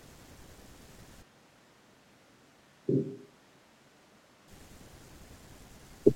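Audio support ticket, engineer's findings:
Speech turns roomy and hollow from 1.24 s to 4.47 s. Abrupt onset, abrupt return. Bass thins out. Level falls by roughly 10 dB. Room noise comes up, sitting around 30 dB below the speech. Likely a switch to a distant microphone: close mic signal dropped, pickup falls back to a farther source such as a camera mic. Distance adds room reflections, loses proximity bass, lowers level. Check close mic feed and routing.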